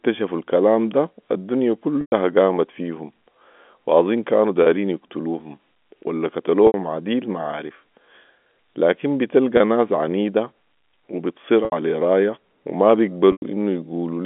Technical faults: packet loss with pitch repetition

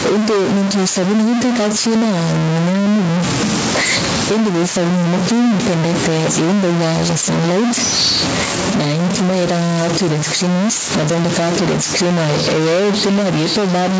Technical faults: stuck bit; gain pumping

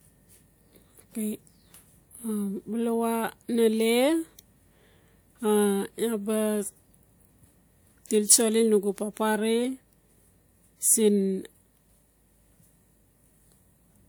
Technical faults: hard clipping

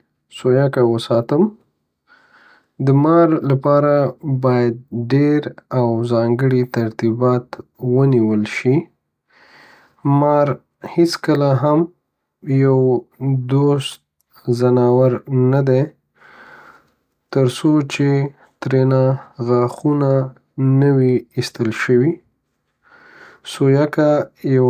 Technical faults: none

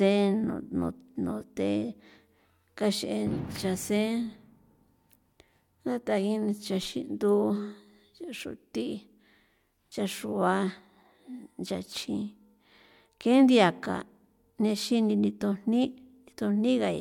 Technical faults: none

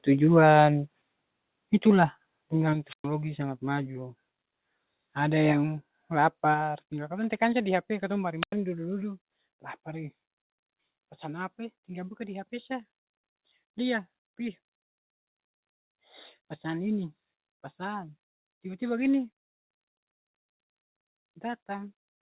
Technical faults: microphone volume stepped down; wireless microphone squelch dropout

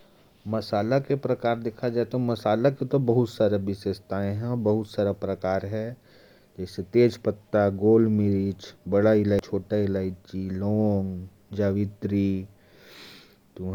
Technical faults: damaged data in a compressed stream

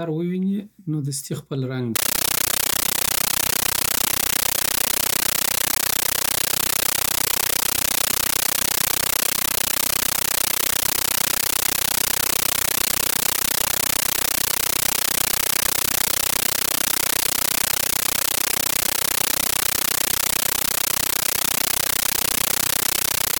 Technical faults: compressed stream played as audio

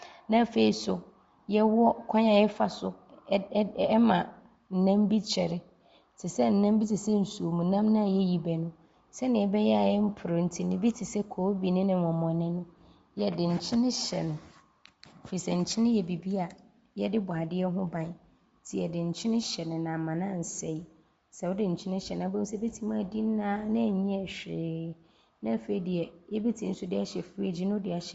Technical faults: Bluetooth LC3 compression

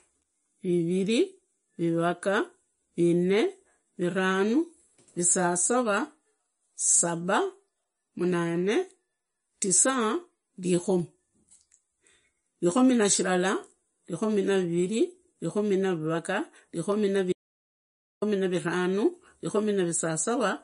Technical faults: MP3 compression; audio dropout to silence

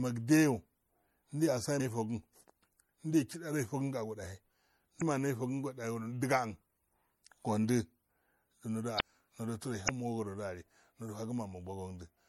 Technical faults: MP3 compression; damaged data in a compressed stream

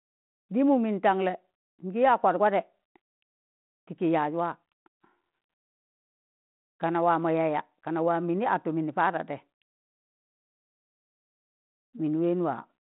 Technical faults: none

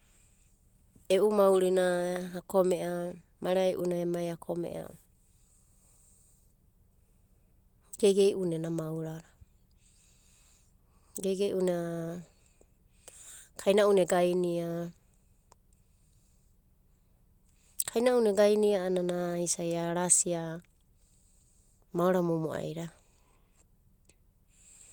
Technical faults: none

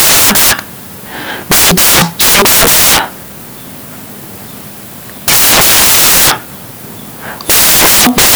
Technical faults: samples built from the wrong bytes

